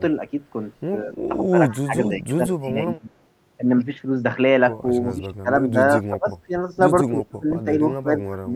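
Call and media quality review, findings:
Speech suppressed in double talk: level dips up to about 25 dB at 1.04–3.1, 5.17–5.48, 5.71–5.76, 6.09–6.29, 6.46–6.53 and 7.06–8.56 s. Likely echo canceller attenuating near-end talker during overlap.

Echo leak: faint delayed copy at 1.69–1.75 s, 169 ms lag, roughly 25 dB below speech. Likely far-end loudspeaker echo escaping cancellation.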